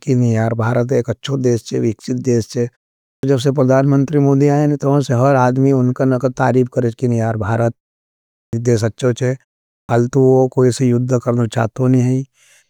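At 3.16 s, 8.46 s and 9.82 s, speech resumes with a clipped start after a pause: roughly 70 ms of the onset is swallowed each time, so "जब से परदान मंत्री", "देश अच्छो थे" and "वो कोई से युद्ध" begin abruptly without their first sounds. The preceding pauses of 0.48 s, 0.74 s and 0.46 s let the output path drop into an idle state, and it needs about 70 ms to wake before sound passes again.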